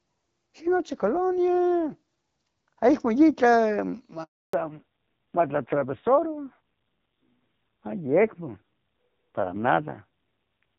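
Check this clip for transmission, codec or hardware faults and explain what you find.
Two transmission faults show up, one right after the other partway through the call. Before them, the HD Voice (AMR wideband) link carries the speech cleanly, with the light coding texture that fits a rate of about 12.65 kbit/s.

Handover gap, 4.23 to 4.53 s: the call is being moved from one network to another, and for 0.3 s no speech frames arrive. The sound fades out within a few tens of milliseconds and stays silent until the new link takes over. Anything spoken in that window is gone. On a waveform it appears as a flat stretch of near-zero amplitude. On a spectrogram it appears as a blank vertical band across all frequencies.

Fallback to narrowband, from 4.53 s to the end: after the handover the call no longer runs on wideband coding but on an older narrowband codec, and the sound points to narrowband AMR at around 5.9 kbit/s. 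Nothing above 4 kHz survives, so the speech turns duller and rougher from that moment on. A spectrogram shows a hard ceiling at 4 kHz where energy previously reached about 7 kHz.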